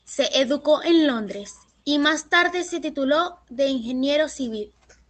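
No faults detected in the speech; the top end rolls off around 8 kHz with the coding texture expected of a low-bitrate call codec such as Opus, which is normal for that path.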